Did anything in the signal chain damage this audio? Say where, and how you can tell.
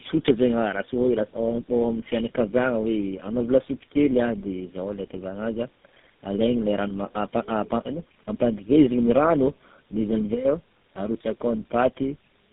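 Yes, at the codec stage, throughout the speech: tandem speech coding. The speech is rough, muffled and warbly across the whole clip, with nothing above about 3.7 kHz. The damage sounds like three low-rate speech coders in series, which fits G.729A followed by GSM full rate twice, with G.711 links between them. Each coder re-encodes the previous one's already damaged output, so their quantisation errors add up.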